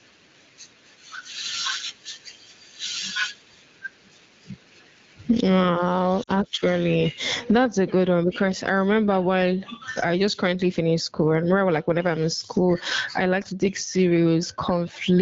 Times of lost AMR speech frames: 6.23-6.30

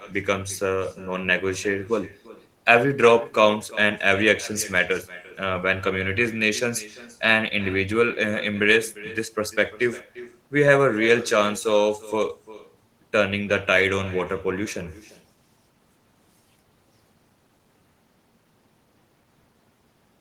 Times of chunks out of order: none

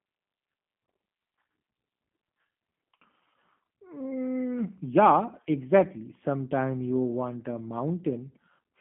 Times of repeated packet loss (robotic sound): none

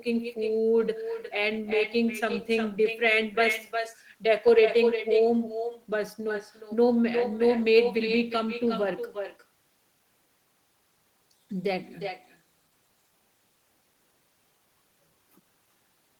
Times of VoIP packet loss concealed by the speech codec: none

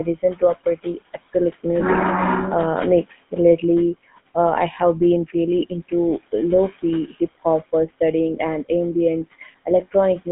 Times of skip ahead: none

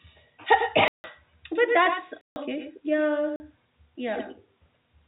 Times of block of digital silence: 0.88-1.04, 2.21-2.36, 3.36-3.40

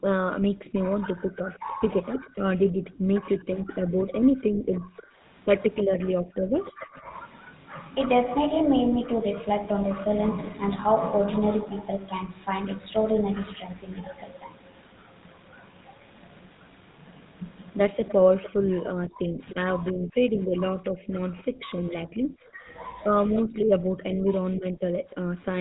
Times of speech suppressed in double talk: 18.55-25.31

